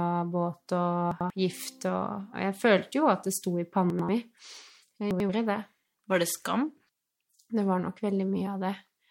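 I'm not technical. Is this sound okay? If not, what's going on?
No. Three brief jumbled moments, at 1.12 to 1.30 s, 3.90 to 4.09 s (right after "at det sto i"), and 5.11 to 5.29 s. These are chunks out of order: a slice of about 93 ms played one slot late, so nothing's missing but the order's swapped.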